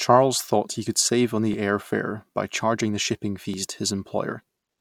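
A small skip breaks the speech at 1.54 s, between "he could save on" and "air fare by charging", and again at 3.54 s after "by charging the shipping". This is overlap between stream segments. The player trimmed about 17 ms and 13 ms of sound that was never duplicated, at boundaries spaced 2 s apart.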